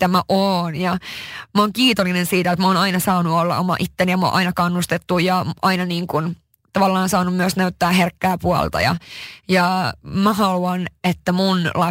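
From start to finish the speech carries crude rate conversion. The sample rate was raised by a small ratio, which fits a change from 44.1 kHz to 48 kHz. No filter was used. Extra samples were made by simply repeating the nearest existing one. That repetition follows a fixed pattern set by the two rates. It adds shifted, inharmonic copies of the speech, roughly 25 dB below it. They sound like a gritty, inharmonic fizz riding on louder and brighter sounds.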